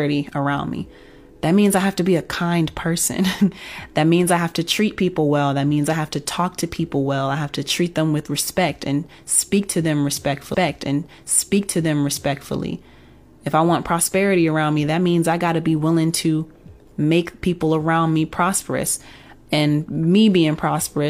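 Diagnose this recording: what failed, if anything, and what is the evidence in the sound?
A stream segment repeated at the playback stage. Just after "and speak to them", at 10.50 s, the speech jumps back with a small blip and about 2.0 s of programme plays a second time, running to 12.50 s. The player fetched or queued the same segment twice and played it through in full. A buffer underrun or packet-loss loop would repeat only a few tens of milliseconds and sound like a stutter, whereas here a whole two-second stretch recurs intact, which fits a duplicated stream segment.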